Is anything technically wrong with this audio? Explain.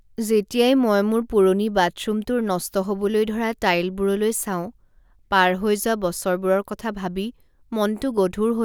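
No, nothing stood out as technically wrong when listening to this speech recording.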